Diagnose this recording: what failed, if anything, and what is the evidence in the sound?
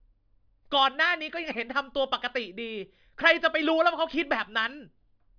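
Listening to the speech carefully, nothing in the recording stood out as a fault at any stage.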